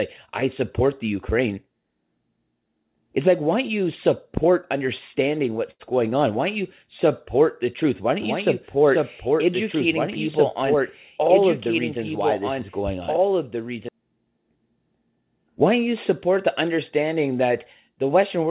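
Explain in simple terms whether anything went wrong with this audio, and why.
At 5.71 s, just after "don't you support understanding", a short stall from a late packet holds the sound for about 0.09 s before "going on" resumes. Nothing is lost.

From 8.22 s to 13.89 s there is a doubled audio track. A quieter copy of the speech trails about two seconds behind, likely from a second, slower capture path.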